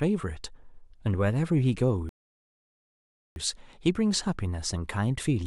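A speech recording with a rebuffering stall: at 2.09 s the audio drops abruptly to silence and picks up again at 3.36 s exactly where it stopped, so nothing is skipped but about 1.27 s of dead air is inserted. The player ran short of downloaded data and paused until more arrived. On a waveform this shows as a flat line splitting the speech; a spectrogram shows a blank vertical gap with clean edges on both sides.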